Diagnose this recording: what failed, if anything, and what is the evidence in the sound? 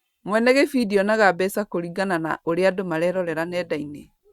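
Nothing failed at any stage, since the speech shows no dropout, distortion, level jump or timing disturbance anywhere in the recording.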